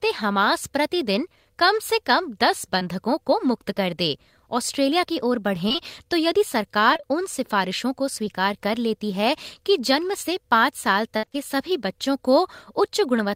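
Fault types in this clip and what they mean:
short concealed packet loss: Roughly 20 ms of the speech arrived too late to decode, at 2.79 s and again around 8.25 to 8.33 s. The receiver covered each hole by stretching the preceding sound and then blending back into the real signal, so each one is heard as a single brief smear or wobble. What sets it apart from the repeated kind is that each hole is isolated, with intact audio on both sides and no choppy run.
repeated packet loss (robotic sound): Across 5.69 to 5.80 s, 6.93 to 7.05 s and 11.17 to 11.36 s, packets went missing three or four times in quick succession. Nearly half of each of the first two stretches is synthesized fill, and more than half of the last, where the longest gap reaches 58 ms. Because each patch copies the last sound before the next hole arrives, these passages turn choppy rather than showing one isolated blip.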